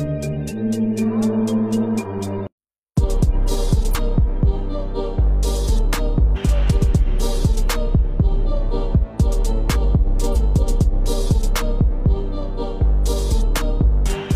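Compressed frames skipped at 3.90, 6.32 and 10.31 s. The audio jumps ahead roughly 50, 200 and 150 ms, consistent with 46.4 ms codec frames.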